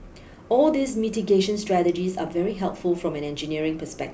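Speech recording with no audible technical faults.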